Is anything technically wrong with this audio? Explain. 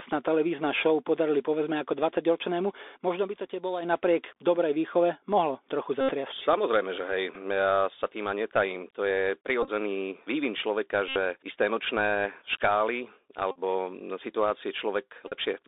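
Yes, there are three kinds of fault.

A Bluetooth CVSD headset codec shapes the whole recording. The sound is squeezed into a telephone band of about 300 Hz to 3.7 kHz. The one-bit, 64 kHz up-or-down coding is plainly audible as a granular hiss under the speech, with scratchy s sounds and roughness on loud high-pitched passages where the adaptive step can't keep up.

A loudspeaker feedback squeal runs from 2.53 to 3.98 s, ending just before "dobrej výchove mohlo trochu". The microphone is picking up its own loudspeaker, and the loop gain exceeds one at 5 kHz. That single tone swells over roughly 0.7 s and sits about 5 dB above the speech.

Bluetooth headset packet repeated occurs at 6.01 s (just after "dobrej výchove mohlo trochu"), 7.35, 9.63 (just before "vývin človeka"), 11.08, 13.51 and 15.28 s. Lost packets were replaced by re-decoding the previous one. The longer gaps of about 79, 75, 45 and 38 ms produce a short buzz near 267 Hz. 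At 9.63 s the losses are scattered, giving a broken buzz over about 60 ms. At 7.35 s a 7.5 ms repeat is only a brief tick.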